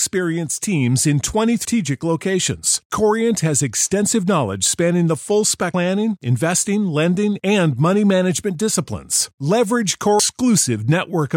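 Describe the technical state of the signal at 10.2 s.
At 10.2 s there is damaged data in the compressed stream. The decoder misreads the corrupted frame, loses sync and hunts for the next header. A brief glitch, a chirp, squawk, click or short hole, breaks the speech.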